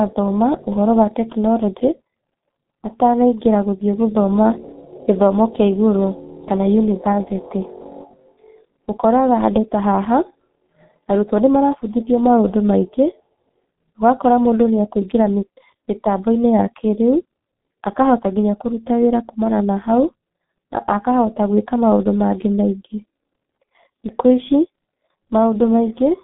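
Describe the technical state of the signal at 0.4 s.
At 0.4 s the speech is carrying G.723.1 codec damage, which runs through the whole clip. The codec rebuilds the voice from a coarse model refreshed only every 30 ms frame, at a rate that sounds like about 6 kbit/s, so consonants smear and the tone turns muffled and hoarse. On a spectrogram the energy sits in a telephone band of roughly 150 Hz to 3.7 kHz, with a bare region above 3.8 kHz.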